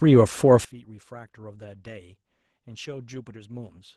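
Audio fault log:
Throughout: Opus voice compression. The speech has a muffled, slightly hoarse and faintly robotic edge. That's the linear-prediction core coding the lower band with a coarse excitation, while a thin transform layer carries what sits above 8 kHz. The top end is present. The damage is plainly audible and fits a low-rate voice setting of around 16 kbps with 20 ms frames, where there simply aren't enough bits to keep the voice texture clean.
0.65 s: sudden gain jump. The whole signal, speech and background noise together, drops by about 22 dB in a single step and stays down until the end of the clip. There's no fade or ramp, so the change is instant and can carry a click at the step. The likely cause is a gain setting or bit shift applied abruptly mid-stream, which scales everything at once.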